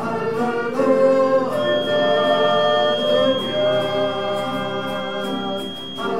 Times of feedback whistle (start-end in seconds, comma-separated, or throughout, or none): 1.52-6.19